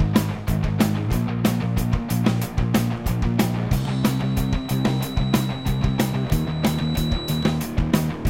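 From 3.81 s to 7.64 s a feedback whistle sits behind the sound: a thin, steady tone at 3.9 kHz, roughly 20 dB below the main signal, swelling and fading slowly in level. The likely cause is a loudspeaker-to-microphone loop held at the edge of instability. At 3.9 kHz the loop gain reaches about unity, so that one frequency keeps recirculating and sustains itself. It neither decays nor grows into a full runaway howl.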